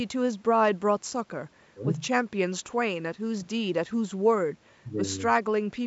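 No faults turn up anywhere in this speech, which simply carries the usual mark of a call's microphone processing, with the lowest bass trimmed and nothing above about 8 kHz.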